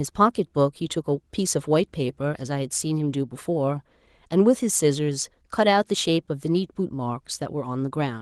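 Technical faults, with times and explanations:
No technical faults can be heard in this speech, which has been through Opus voice compression at 20 kbps in hybrid mode with the full audio band kept, leaving only a light coding texture on the signal.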